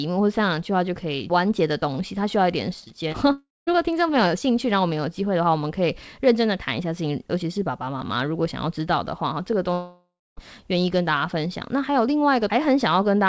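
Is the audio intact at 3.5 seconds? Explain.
No. From 3.32 to 3.69 s the speech breaks off in what sounds like a long network dropout, likely packets that never arrived. The receiver stretches the last sound into a buzz that fades over about 350 ms, with roughly 200 ms of near-silence, then the speech resumes with about 360 ms missing. On a spectrogram, already empty above 8 kHz from the G.722 call path, the harmonics smear into a fading band, then a blank patch, before an abrupt restart.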